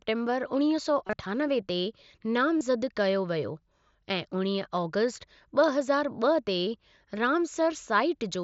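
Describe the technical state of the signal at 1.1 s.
Concealed Bluetooth headset packet loss occurs from 1.07 to 1.13 s, just before "अठानवे ते". About 45 ms of audio is missing across 60 ms, with runs up to 22.5 ms. The receiver refills each gap by repeating the best-matching recent waveform, producing a brief buzzy, held tone and a slight warble as real audio resumes, on top of the light graininess of the mSBC wideband link.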